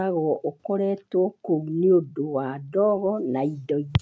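Nothing goes wrong anywhere in this bit of speech; it simply carries the usual sound of a call microphone chain, with the deepest bass trimmed away and nothing above 8 kHz.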